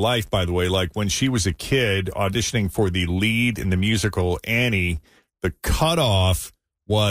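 A filter restarted on every block runs throughout this speech clip. The processing clears its internal state at each block boundary and starts again from silence. Each new block therefore opens with a small transient. These repeat at about 86.1 Hz, which fits a 512-sample buffer. They are heard as a low buzz under the speech that grows louder as the speech grows louder and fades in quieter passages.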